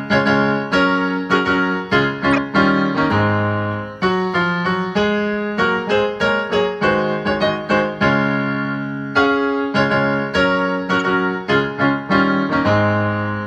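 At 2.32 to 2.38 s a corrupt frame was decoded: damaged bits in a few consecutive compressed frames were played as if valid, so misread gains and codes put energy at the wrong frequencies. It sounds like a loud squeaky burst peaking around -5 dBFS. A quieter chirp follows at 10.98 to 11.02 s. On a spectrogram each shows as a short blocky smear of stray energy. On the waveform each appears as an abrupt spike.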